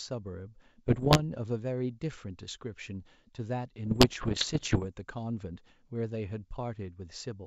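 Bit errors on an ADPCM link hit this speech clip from 0.87 to 1.21 s and again from 3.86 to 4.87 s, heard as pops and rough, crackling bursts with brief jumps in level. Each flipped bit corrupts the decoder's step size and prediction, so the damage rings on for a few milliseconds rather than clicking once. The density of errors is roughly one or two percent, on a wideband G.722 link whose clear top end stays intact.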